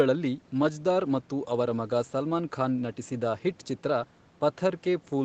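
No technical faults can be heard in this speech.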